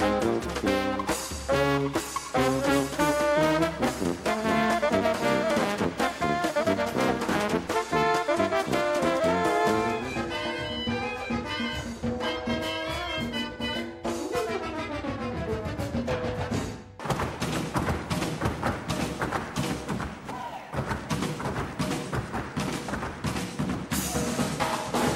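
No technical faults are audible.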